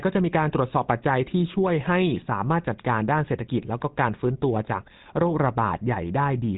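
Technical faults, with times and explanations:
Throughout: GSM full-rate codec. Nothing reaches above about 3.8 kHz, and the speech carries a plainly audible buzzy, gravelly roughness. This comes from a vocal-tract model driven by coarse, regularly spaced pulse excitation, consistent with a 13 kbps full-rate coder.
0.30 to 6.33 s: clock slip clicks. About seven faint ticks arrive roughly once per second, each a single dropped or repeated sample. The likely cause is two unsynchronised clocks drifting apart by around 20 ppm, forcing a one-sample correction whenever the offset accumulates.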